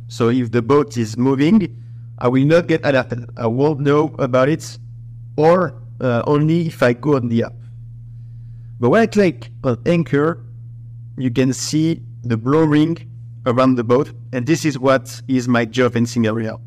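All the way through, there's hard clipping. The level going in sits about 7 dB hotter than the stage can pass, so the loudest peaks get sliced flat. Only around one percent of the signal actually hits the ceiling, so you won't hear constant fuzz. Instead, the strongest moments pick up a gritty crackle, because those squared-off tops throw harmonics well up into the high end.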